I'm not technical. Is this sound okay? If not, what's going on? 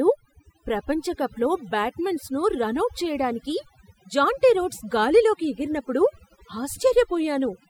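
No. The speech has overdone noise removal running through the whole clip. A cleanup tool was set so strong that, besides wiping out the background noise, it also shaves off the softer parts of the voice. That leaves the pauses much quieter, with twinkling specks. Unlike ordinary background noise, the problem here is too little sound, with the voice damaged along with it.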